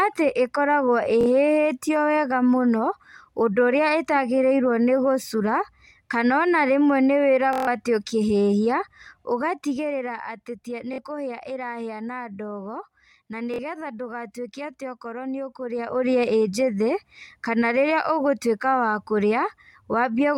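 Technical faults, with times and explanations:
1.21 to 13.59 s, Bluetooth stutter: A brief buzzing repeat breaks the speech at 1.21 s, 10.93 s and 13.54 s, each about 46 ms long. A longer machine-gun stutter of about 139 ms runs from 7.53 to 7.67 s. Each time, data failed to arrive and the receiver kept replaying its last short slice. The short gaps fit about two lost packets and the long one about six. The speech then resumes further along, as though it had kept playing underneath.
9.05 to 10.33 s, zipper noise: A fine ticking rides on the speech as it fades about 10 dB down in 1 dB steps, at around ten steps a second.
15.62 to 16.13 s, zipper noise: The level rises about 10 dB in coarser 2 dB steps at a similar rate, so the clicks are stronger here. In both cases the gain jumps between fixed values with no smoothing, and each jump leaves a small click.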